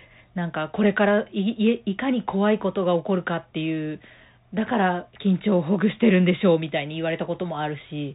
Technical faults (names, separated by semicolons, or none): Bluetooth CVSD headset codec